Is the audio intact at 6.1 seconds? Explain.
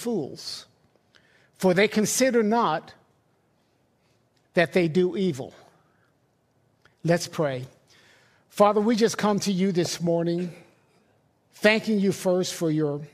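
Yes, the audio is intact at 6.1 seconds, with no fault audible at that moment.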